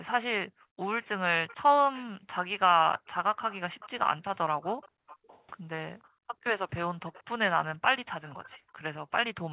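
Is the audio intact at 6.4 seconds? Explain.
No. At 6.4 seconds two problems overlap. A faint, delayed copy of the speech trails the original by about 0.49 s and sits roughly 20 dB below it. This echo leak runs from 1.03 s to the end of the clip. It likely comes from a far end on a loudspeaker whose echo canceller failed to fully remove what its microphone picked up, so the leftover was sent back.

The moment also marks the end of the background gated by the echo canceller, which spans 4.9 to 6.4 s. Across that stretch the room sound dips, at most about 30 dB deep and adding up to about 0.4 s. While the loudspeaker played, the canceller pulled the microphone down hard. At 6.4 s it releases, and the background returns.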